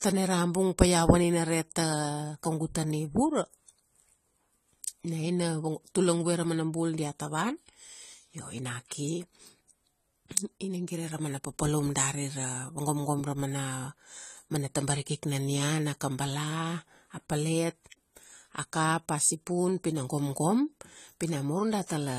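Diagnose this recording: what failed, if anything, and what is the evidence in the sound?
Codec stage: AAC compression audible throughout the speech, likely low-bitrate AAC-LC near 32 kbps. The spectrogram shows a flat ceiling at 14.1 kHz, with nothing above it.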